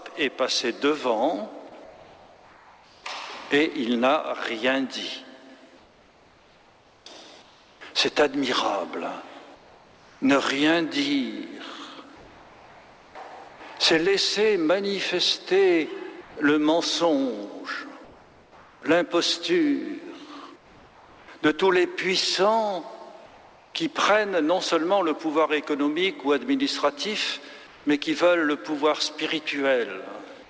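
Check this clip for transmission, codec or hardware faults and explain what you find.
Comfort noise repeatedly stands in for the background: between 1.84 and 3.04 s, 5.77 and 13.6 s, 16.21 and 23.74 s, and at 27.67 to 27.85 s. The likely cause is discontinuous transmission, where the sender stopped sending during pauses and the receiver generated synthetic noise. The real background gives way to steady, featureless hiss, about 2 dB quieter in the first and last spans. The call path itself has nothing above 8 kHz, which fits a wideband codec such as G.722.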